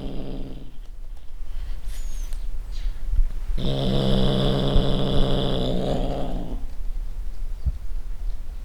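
A recording of sounds with no technical fault to be heard anywhere in it. Nothing in the audio points to a problem in how it was captured, processed or delivered.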